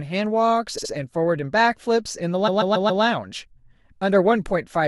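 At 0.77 to 0.91 s the speech stutters from repeated frames: a 69.7 ms slice of coded audio is played twice more, which fits a run of about three compressed frames being sent again. A longer stutter follows at 2.47 to 3.03 s, where a 139.3 ms block repeats four extra times, consistent with about six frames. The two faults stretch the audio by about 0.7 s.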